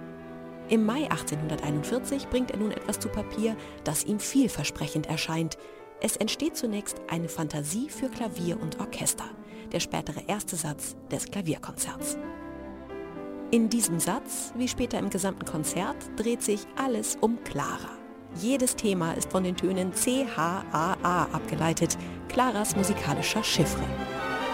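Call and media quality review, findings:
Crude rate conversion, whole clip. Gritty, inharmonic fizz riding on loud and high-frequency sound. Samples dropped or repeated with no filtering. The pattern fits a 48 kHz to 44.1 kHz resample. Error is strong, only around 20 dB below the signal.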